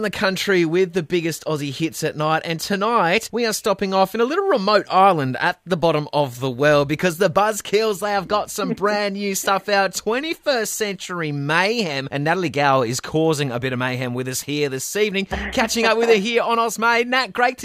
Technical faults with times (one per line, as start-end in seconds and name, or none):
none